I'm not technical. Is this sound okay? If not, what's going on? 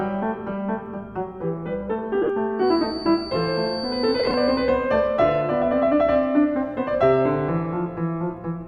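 No. Twice, the Bluetooth LE Audio link dropped short bursts of frames. These lost LE Audio frames hit from 2.22 to 2.30 s and again from 4.19 to 4.34 s. The receiver covered each gap by guessing from the last good moment, so the music briefly turns into a noisy smear, in breaks of about 20 ms at most.

From 2.57 to 4.77 s, a high, thin feedback whistle near 4.6 kHz sits quietly behind the music and slowly swells and fades. It is likely caused by a loudspeaker feeding back into a microphone that is just on the edge of howling but never runs away.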